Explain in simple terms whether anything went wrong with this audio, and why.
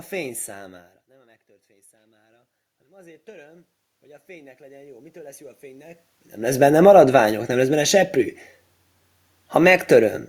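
Twice the voice and the room noise behind it slowly swell louder together: from 1.12 to 3.75 s, after "fény számára", and again from 4.26 to 6.92 s, before "nem lesz benne seprű". This is automatic gain rising: the input became much quieter, so the automatic level control gradually turned itself up to compensate.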